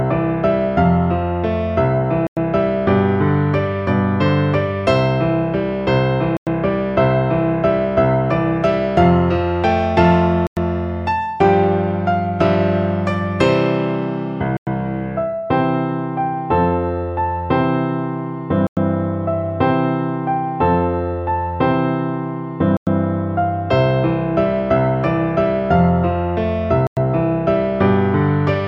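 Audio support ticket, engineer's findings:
Gap between chunks: seven hard-edged 100 ms holes at 2.27, 6.37, 10.47, 14.57, 18.67, 22.77 and 26.87 s. Regular spacing, one every 4.1 s, fits 4.0 s chunks with a fixed silence inserted at each join. Probable component: chunked transport or playback, via codec padding or a player starting each chunk late. No audio missing, only interrupted. Check chunk boundary handling and start-up latency per segment.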